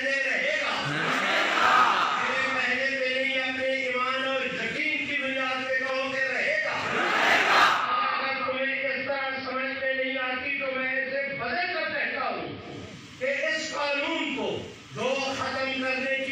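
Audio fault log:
7.62 to 12.85 s, digital radio blending to analogue: the receiver loses the digital stream and cross-fades over 290 ms to the AM broadcast of the station, so treble is cut, level drops about 1 dB, and hiss rises to roughly 30 dB below the programme, reversing at 12.85 s.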